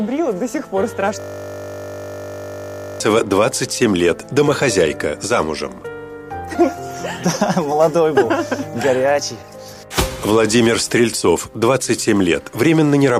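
From 1.2 to 3.0 s the sound collapses into a steady 50 Hz buzz, a single 20 ms fragment repeated ninety times. This is a system hang loop: the computer or driver stalled while the audio hardware kept replaying one small ring buffer.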